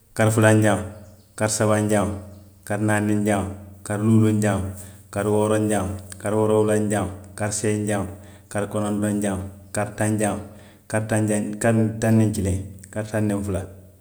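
No technical faults can be heard anywhere in this speech recording. There is no moment in it that needs a time or a value marked.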